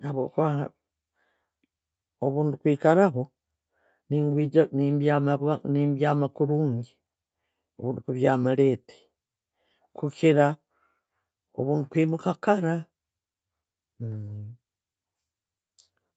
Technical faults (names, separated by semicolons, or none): none